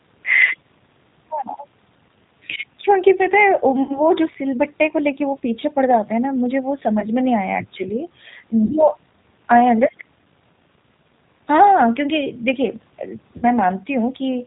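The speech runs through the G.729 codec at 8 kbit/s for its whole length. The codec rebuilds each 10 ms frame from a vocal tract model and a few pulses and discards everything above 4 kHz, so the sound is muffled, rough and plainly synthetic.

VoIP packet loss concealed by the speech codec occurs at 3.83–4.01 s, 7.00–7.06 s, 8.66–8.72 s and 13.37–13.48 s. The gaps last about 60, 20, 40 and 60 ms. The decoder fills each gap by extending the last sound into a buzzy tone or coloured noise that fades, and the speech stays weak for a moment after each one.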